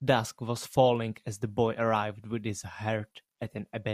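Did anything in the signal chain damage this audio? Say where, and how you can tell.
No, no damage in the chain.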